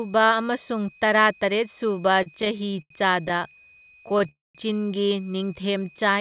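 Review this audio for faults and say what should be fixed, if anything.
A switching supply whistle runs through the whole recording as a thin tone near 2.5 kHz, wandering slightly between about 2.50 and 2.52 kHz, roughly 30 dB below the speech. A switching regulator operating in an audible burst mode, or beating against another supply, produces it. Fix it by filtering or relocating the supply, or by forcing it to a fixed switching frequency above the audio band.

Repeated stalls (stutter) occur from 2.14 to 2.92 s and again from 3.28 to 4.27 s. The first span has ten hitches, the longest about 88 ms, and about a quarter of that span is concealment. The second has fourteen short hitches, none longer than about 27 ms. Packets arrived late or too slowly, so the jitter buffer kept running dry and the receiver stretched the last sound each time. Nothing is lost, but delivery drags. Fix it by reducing network jitter or allowing a deeper jitter buffer.

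A call audio freeze follows at 4.29 to 4.57 s. The sound is held and then fades to about 180 ms of silence before resuming where it stopped, inserting roughly 260 ms of delay with nothing missing. The likely cause is packets held up in transit that emptied the jitter buffer. Prevent it by prioritising the media stream (QoS) and removing the path stall.

A jitter buffer slow-down runs from 5.39 to 6.15 s. Playback drops to about 88% speed at unchanged pitch, adding about 94 ms as the receiver repeats pitch periods to rebuild its reserve, which draws the sounds out. Keeping arrival timing steady avoids this.

The audio is also band-limited at 4 kHz, which fits a narrowband G.711 call path and is expected rather than a fault.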